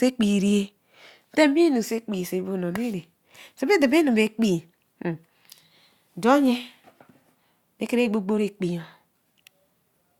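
No technical faults can be heard anywhere in the speech.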